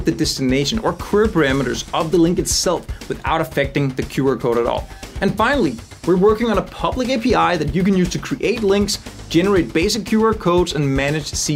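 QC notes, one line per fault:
Nothing stood out on listening.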